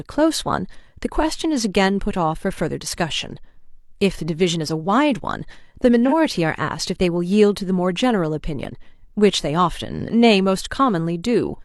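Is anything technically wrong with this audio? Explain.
Yes. From 6.07 to 6.13 s there is AAC frame loss with concealment: a gap of about 43 ms, which fits one lost AAC frame, was patched by the decoder from the previous good spectrum. The result is a brief smeared, noisy, phasey patch in the speech.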